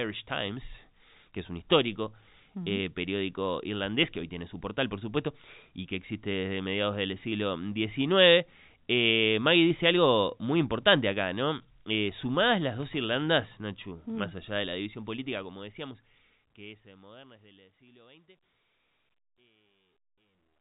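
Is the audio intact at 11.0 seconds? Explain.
Yes, at 11.0 seconds the audio is intact, with no audible fault at that moment.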